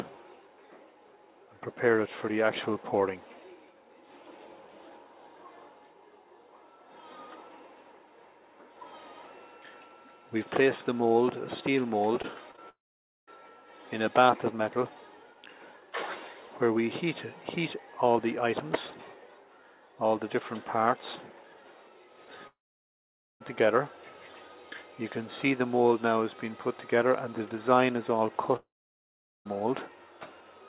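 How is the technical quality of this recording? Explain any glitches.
The recording has audible faults: three brief glitches around 12.2 to 12.6 s and three longer gaps. It carries the narrow sound of a phone call, with nothing above 4 kHz, which fits a G.711 mu-law call codec.

Short concealed packet loss occurs at 12.22–12.25 s, 12.51–12.56 s and 12.56–12.59 s. About 20 ms of audio went missing each time. The receiver patched each hole by extending the sound just before it, then blended back into the real signal. Each one is heard as a quick smear or wobble. The last two run back to back, so the sound wobbles briefly.

Long network dropouts occur at 12.69–13.29 s, 22.47–23.42 s and 28.56–29.47 s. These are likely caused by stretches where no packets arrived. About 0.58, 0.94 and 0.9 s of audio are lost. Each gap starts with a short fading continuation of the last sound. Then comes silence of roughly half a second in the first gap and about 0.8 to 0.9 s in the others. 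The audio resumes later, with the missing part simply gone.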